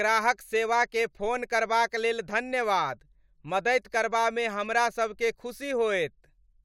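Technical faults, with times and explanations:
No technical faults are heard in this speech.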